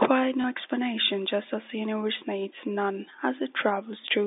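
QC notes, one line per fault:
0.42 to 0.44 s, packet loss with last packet repeated, just before "explanation just as the". About 20 ms of audio went missing, which fits a single lost 20 ms packet. The receiver filled the gap by replaying the packet before it. That copy seldom lines up with the pitch cycle of the speech. The result is a brief, small blip over the narrow telephone band.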